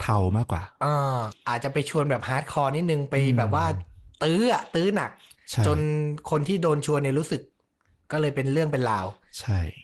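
There are no technical faults to describe in this speech, and the call path it passed through works as expected.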